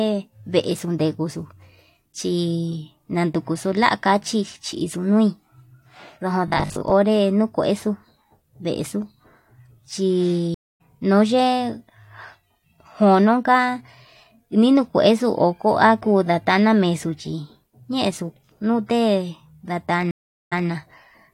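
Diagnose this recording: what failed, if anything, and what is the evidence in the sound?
Robotic sound from repeated short buffers, 6.48 to 6.94 s: the speech turns into a rigid metallic buzz at 50 Hz that still loosely tracks the words. The buzz means a 20 ms chunk is being replayed in a loop, which fits a 20 ms buffer, and about half the audio in that stretch is repetition while the real material is skipped. The stage is likely the driver or buffer layer, where fresh audio arrived too slowly and the last block was reused to fill the gap.

Stream reconnect, 10.54 to 10.81 s and 20.11 to 20.68 s: this is a network-stage failure. Each event starts with a hole in the audio, 255 ms the first time and 406 ms the second. After the first gap the speech picks up roughly 300 ms further on, so that material is lost. After the second it resumes 163 ms earlier, repeating a short stretch as the server resends buffered audio. 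In both cases the connection dropped and the player restarted its decoder mid-stream.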